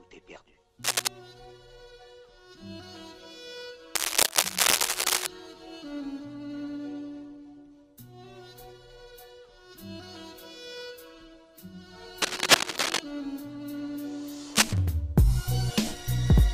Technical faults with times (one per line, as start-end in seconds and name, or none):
0.83-1.08 cable scratch noise
3.95-5.27 cable scratch noise
12.22-12.99 cable scratch noise
14.54-14.74 cable scratch noise